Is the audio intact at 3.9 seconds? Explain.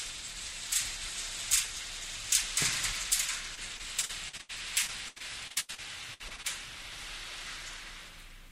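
No. At 3.9 seconds the audio sits inside a run of repeated packet loss, from 3.55 to 4.51 s. Seven gaps occur, the longest 78 ms. Each is patched by extending the previous sound. About a quarter of the span is concealed, so it sounds choppy and robotic.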